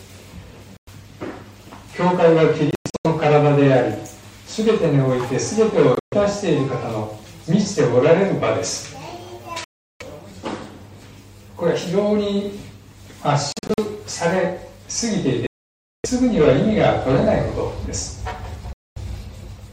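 Gaps of silence cut into the audio at 0.77–0.89 s, 2.71–3.07 s, 5.95–6.14 s, 9.64–10.02 s, 13.52–13.79 s, 15.47–16.06 s and 18.73–18.98 s, the longest lasting about 0.58 s. At 2.71 s and 13.52 s the gap breaks into several short holes rather than one. Each time the sound returns further along, as though it had kept playing underneath. This is a Bluetooth dropout, likely from packets arriving too late at the headphones and being discarded. On a waveform the gaps are flat, hard-edged stretches, and a spectrogram shows them as blank vertical bands.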